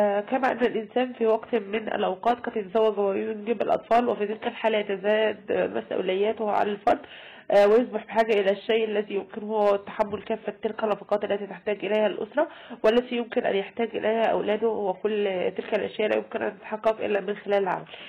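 Hard clipping runs through the whole recording: the signal is driven about 6 dB past what the chain can pass, so its peaks are sliced flat. Since only a small fraction of samples hit the ceiling, it comes across as crackle on the loudest moments rather than constant fuzz, and unlike soft saturation the grit appears abruptly on peaks instead of thickening the tone gradually. From 1.68 to 3.68 s an adaptive stream at a lower bitrate takes over. The treble above 14.8 kHz vanishes and the top end turns thin, which points to a drop from a 96 kbit/s AAC-LC stream to a 20 kbit/s HE-AAC version. The quality switches suddenly in both directions with no dropout or gap, which separates it from packet loss.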